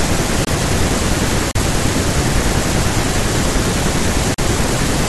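Blocks of digital silence interrupt the speech at 0.45–0.47 s, 1.51–1.55 s and 4.34–4.38 s. The sound cuts out abruptly, likely from buffer underruns.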